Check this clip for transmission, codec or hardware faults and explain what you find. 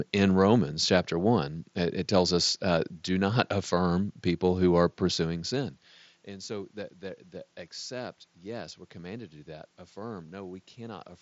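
Nothing in the recording points to a fault in the transmission chain or the hardware. What you hear is a Bluetooth mSBC headset codec working as designed, with the speech band stopping near 7.7 kHz and a light grain on louder sounds, alongside room noise and a level change around 5 seconds where the talker moves relative to the microphone.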